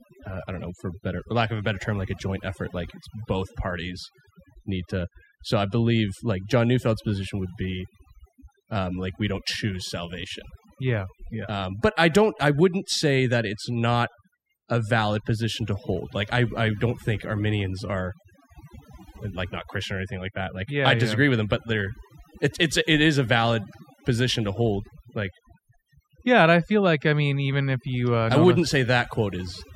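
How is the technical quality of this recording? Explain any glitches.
The technical quality suffers from one fault across the whole clip. Overdone noise removal runs throughout: over-strong suppression shuts off single frequency bands near the noise floor, leaving twinkling specks in near silence. A noise gate mutes everything at once instead.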